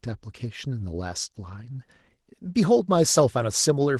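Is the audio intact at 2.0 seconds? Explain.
Yes, the speech at 2.0 seconds is intact, with nothing there beyond the light smoothing of the Opus voice compression it passes through.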